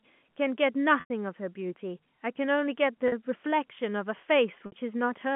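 Packet loss with pitch repetition occurs at 1.0 to 1.1 s (100 ms), 3.08 to 3.12 s (40 ms) and 4.66 to 4.72 s (60 ms). The receiver repeats the last pitch period to fill each gap. The 40 ms loss sounds like a briefly held, buzzy tone. The longer 100 ms loss decays into silence before the sound cross-fades back. On a waveform, identical repeating cycles shrink in amplitude. A spectrogram shows frozen, flat harmonics within the narrow telephone band.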